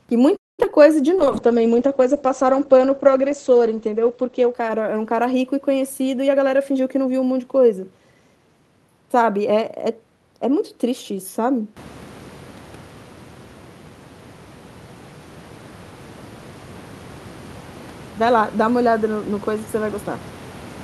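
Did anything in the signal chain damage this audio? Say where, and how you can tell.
Yes. Right at the start, from 0.36 to 0.60 s, the sound stops moving forward. A brief continuation of the last sound decays into about 0.2 s of near-silence, and then the audio resumes from where it left off, with nothing skipped. That is a call audio freeze at the network and jitter-buffer stage. The pattern is likely packets held up in transit, so the buffer ran dry and the receiver padded the wait. That inserted roughly 0.22 s of extra delay.

Immediately after, there are three tiny smears at 0.63 s, 0.65 to 0.67 s and 0.71 to 0.73 s. These are short concealed packet loss. Each time, a fragment of 10 to 20 ms failed to reach the decoder in time. The receiver extrapolated from the preceding sound to cover it and then crossfaded back into the real signal, which leaves that brief wobble rather than a clean gap.

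From 1.18 to 6.27 s the sound turns dull and rough, with the top end missing for about 3 s. This is a call bitrate drop in the codec stage. The bandwidth estimate fell and Opus was pushed from 64 kbps down to 13 kbps. At that rate it codes coarsely and narrows the audio band from 20 kHz to around 8 kHz, so the upper frequencies disappear until the rate climbs back.

Between 6.22 and 7.99 s the sound hurries along at about 113% speed, yet the pitch stays unchanged. That is a jitter buffer speed-up. The buffer was holding more audio than its target. To bring latency down, the receiver cut out many short pitch-period slices in succession, about a fifth of a second in total, which compresses timing without shifting pitch.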